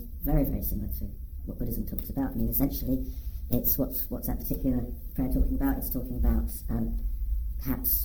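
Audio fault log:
throughout, wrong sample rate: everything runs about 1.38 times too fast and sits roughly 5.55 semitones sharp, with speed and pitch shifted together, which fits material captured at 32 kHz being played back at 44.1 kHz without conversion. The sound comes across as high and hurried. On a spectrogram every harmonic and formant band is stretched upward by the same ratio. The waveform's envelopes are compressed in time, so each event is shorter than it should be.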